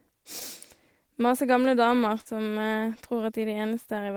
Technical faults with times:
0.39-0.43 short concealed packet loss
2.21-2.27 short concealed packet loss

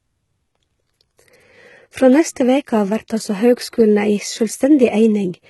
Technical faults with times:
0.00-5.49 HE-AAC compression

